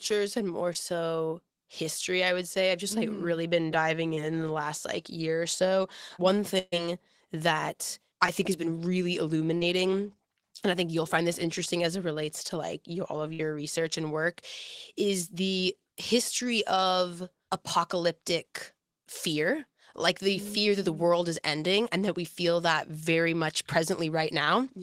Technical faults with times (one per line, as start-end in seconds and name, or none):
0.73-0.77 short concealed packet loss
4.15-4.19 short concealed packet loss
6.59-6.74 burst of packet loss
8.26-8.29 short concealed packet loss
9.57-9.63 short concealed packet loss
13.33-13.41 burst of packet loss